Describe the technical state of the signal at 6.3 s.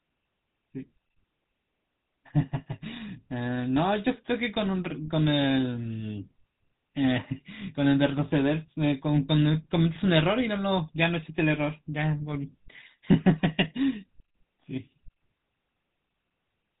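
At 6.3 s you're hearing the GSM full-rate codec, and it's there for the whole clip, not just that moment. It rebuilds speech from a vocal-tract model fed with a sparse pulse train, which fits 13 kbps, so the voice comes out buzzy and gravelly, with nothing above 4 kHz.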